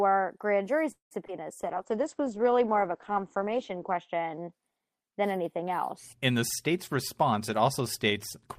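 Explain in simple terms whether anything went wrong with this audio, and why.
At 0.91 to 1.13 s, just after "grand jury", there is a call audio freeze: the last sound stretches into a fading buzz, then about 0.12 s of silence. This is likely delayed network data. Unlike a packet loss, nothing is cut out. The sound simply pauses for about 0.19 s and resumes where it stopped.

Right after, at 1.27 to 1.30 s, comes a short concealed packet loss. About 0.02 s of audio never arrived, and the receiver papered over it with a quick guess, so you hear a brief smear or wobble. Unlike the freeze, real sound is actually missing here, and the blip is much shorter.

From 1.59 to 4.58 s, ending just before "than anything else", there is a call bitrate drop. The connection squeezed the sound into far less data, so it turns rough and muffled, with everything above about 8 kHz cut away. It sits at its worst for about 2.4 s. 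It lasts seconds, not an instant like a dropout.

From 6.42 to 8.21 s, a jitter buffer speed-up makes the audio run about 6% fast as the receiver trims out tiny slices, roughly a tenth of a second in total, to catch up on built-up delay. The pitch stays the same, unlike fast-forwarded audio, but the delivery sounds hurried.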